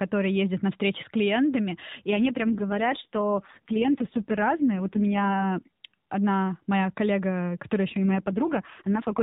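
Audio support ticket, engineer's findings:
Speech goes rough, buzzy and more synthetic from 2.10 to 5.51 s, starting after "встречи с клиентами и" and clearing by "одна моя коллега которая". Bandwidth unchanged, no gap. AMR rate drop: the link forced fewer bits per frame, consistent with 12.2 falling to 4.75 kbps.

Same synthetic roughening from 7.88 to 9.22 s, after "одна моя коллега которая", running to the end of the clip. A repeat AMR rate drop, stepping down from the normal 12.2 kbps AMR-NB rate.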